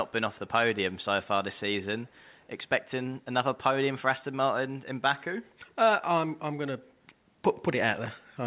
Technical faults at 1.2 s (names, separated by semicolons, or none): none